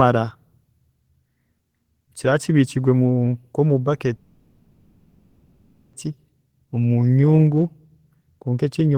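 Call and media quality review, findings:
Call audio freeze, 4.15–5.96 s. Speech stops; the last sound is stretched into a fading buzz, no dead silence. Resumes exactly where it halted, nothing lost. Likely cause: packets stalled in transit, jitter buffer drained, receiver concealment filling about 1.78 s. Net effect: everything after 5.96 s arrives about 1.78 s late.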